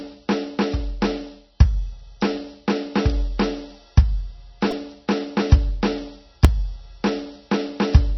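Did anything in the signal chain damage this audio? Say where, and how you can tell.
Yes. The whole clip sounds watery and swirly, with the treble shut off entirely above 5.9 kHz and a smeared, metallic edge on attacks. That points to heavy MP3 compression at the codec stage, likely from a very low bitrate, around 26 kbps.

There is also a repeated buffer in playback, heard as a brief buzz at 4.71 s and a single click at 6.45 s. The driver replayed a tiny piece of audio several times at the first point and once more at the second. The piece is about 2.9 ms long, which fits a 128-sample buffer. Roughly 10 ms and 3 ms of audio were lost at those points.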